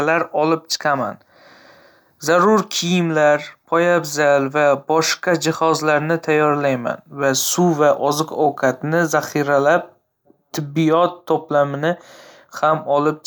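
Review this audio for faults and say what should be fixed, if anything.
Nothing to fix; no faults are audible anywhere in the speech.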